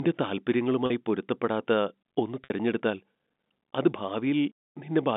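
At 0.86 s, just before "പൊരുത്തപ്പെടാത്ത ഒന്ന് തിരഞ്ഞെടുത്താൽ", and again at 2.44 s, after "പൊരുത്തപ്പെടാത്ത ഒന്ന്", there is packet loss with pitch repetition. About 40 ms and then 60 ms went missing, which fits two and three 20 ms packets. The receiver filled each gap by looping the last pitch period and fading it out, so the first gap sounds like a brief held buzz rather than a silent hole or a click, while the longer second one fades into silence before the speech returns with a short cross-fade, heard through the narrow telephone band.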